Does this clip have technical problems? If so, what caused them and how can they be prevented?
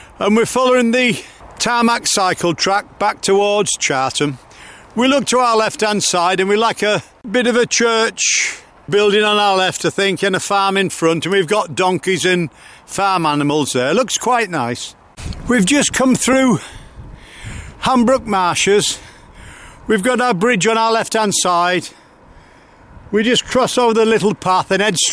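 No, no technical faults are audible.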